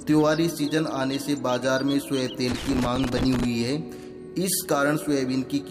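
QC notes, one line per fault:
2.48–3.45 s, loose connector crackle: an irregular burst of scratchy crackle as a worn contact makes and breaks, chopping the signal.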